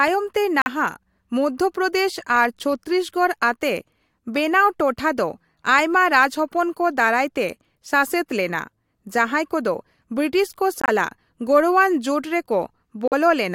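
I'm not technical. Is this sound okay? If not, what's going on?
No. The speech drops to sudden silence three times, at 0.62–0.68 s, 10.82–10.89 s and 13.08–13.14 s. This is corrupt frame muted: damaged chunks of the compressed audio were rejected and replaced with silence, with timing preserved.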